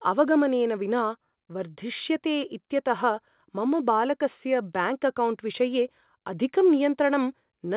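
No technical faults can be heard in the speech. It has come over a call path that leaves nothing above 4 kHz, which fits G.711 mu-law telephone coding and gives it a narrowband, telephone-like sound.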